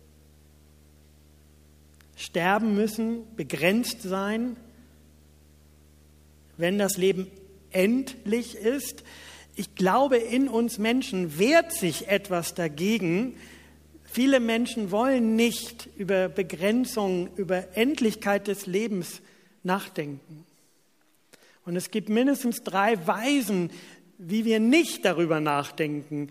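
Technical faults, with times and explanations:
0.00–18.42 s, video or display buzz: a steady 75 Hz buzz with harsh hash above it, roughly 30 dB under the programme, ending at 18.42 s. A screen or video cable refreshing at 75 Hz is coupling its field-rate signal into the audio path.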